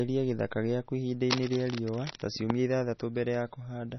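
Throughout, the speech sounds dull and watery, with nothing above 6 kHz and swirling artefacts, likely heavy MP3 compression at a low bitrate near 24 kbps. From 1.30 to 2.27 s, a dense, uneven scratching rustles over the speech, about 10 dB below it, likely cable scratch noise from a worn connector's shifting contact resistance.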